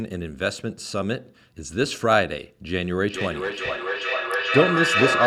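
From 2.97 s to the end, the speech starts coming back on itself, each phrase repeating roughly every 0.4 s, thinner and more ringing with each pass, and the repeats build up rather than fade, reaching about 1 dB below the direct speech. This is feedback echo between two devices: one device plays the other's audio, that microphone picks it up again, and neither echo canceller removes sound played by the other device.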